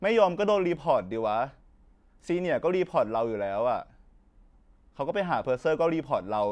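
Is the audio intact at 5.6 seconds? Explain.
Yes, the speech is intact at 5.6 seconds, with no fault to be heard at that moment.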